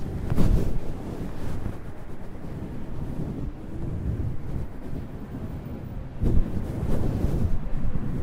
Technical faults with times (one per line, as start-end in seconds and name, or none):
3.42-3.44 lost LE Audio frames